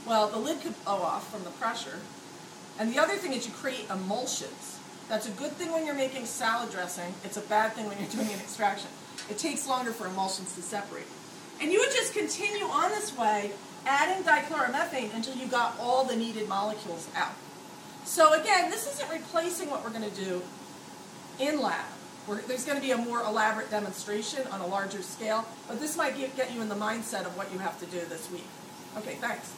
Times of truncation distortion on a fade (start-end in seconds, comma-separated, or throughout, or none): none